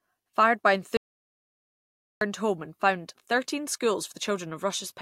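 At 0.97 s the speech cuts off abruptly and the clip falls into an audio dropout to silence lasting about 1.24 s, until 2.21 s, when it resumes mid-flow on "home and founded". The gap is dead digital silence with no room tone, so whatever was said there is lost. The likely cause is the input dropping out while the recorder kept writing silence. A waveform shows a flat line, and a spectrogram shows a blank vertical band.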